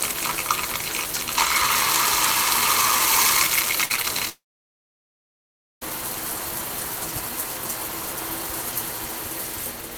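Between 3.85 and 4.05 s, three short concealed packet losses (3.85–3.92, 3.96–4.00 and 4.02–4.05 s) replace roughly 40, 20 and 20 ms with continued sound, heard as brief smears rather than gaps.

From 4.29 to 5.83 s comes a long network dropout, likely from packets that stopped arriving. A fading buzz or hiss gives way to about 1.4 s of silence, and the sound returns with that stretch missing, unlike the short smeared patches.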